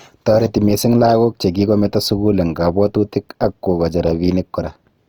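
Opus compression runs throughout, plainly audible as a grainy, rough texture on the speech. The likely cause is a low-rate CELT-mode encode, consistent with about 24 kbps, filling starved bands with folded or noise-like energy while keeping full bandwidth up to about 20 kHz.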